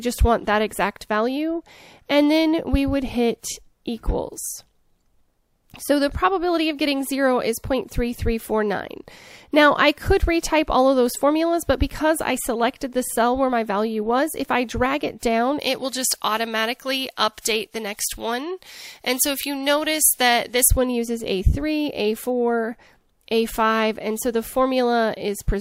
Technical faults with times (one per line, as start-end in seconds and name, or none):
15.59-20.68 pre-emphasis left on